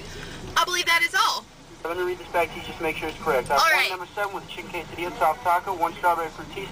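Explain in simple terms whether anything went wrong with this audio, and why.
Nothing went wrong here: the signal holds steady the whole way, with no dropouts, glitches or other technical problems to be heard at any point.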